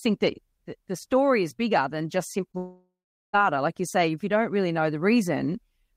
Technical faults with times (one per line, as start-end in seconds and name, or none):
2.51-2.55 short concealed packet loss
2.57-3.35 long network dropout